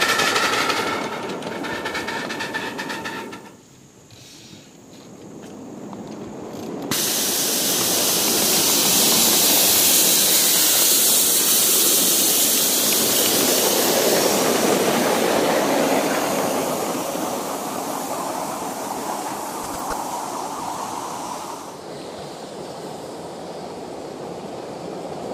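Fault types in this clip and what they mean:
DAB burbling: weak reception lets bit errors slip past error correction into the MP2 data, so bad scale factors make single sub-bands leap for a frame. It's a burst of burbling from 11.04 to 11.17 s and again, longer, from 19.52 to 20.0 s.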